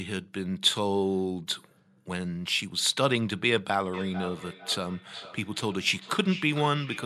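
From 3.94 s to the end, the speech picks up a feedback echo between two devices. Each word returns roughly every 0.4 s, thinner and more ringing. The loudest repeat sits about 13 dB below the speech. A second device is replaying this microphone's sound, which is picked up again, and no echo canceller catches it.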